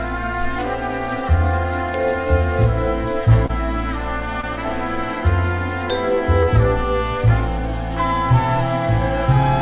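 Brief smears or wobbles at 3.46–3.51 s, 4.41–4.45 s and 6.43–6.49 s come from short concealed packet loss: about 20 to 40 ms per gap arrived too late, and the receiver extended the preceding sound to cover each hole.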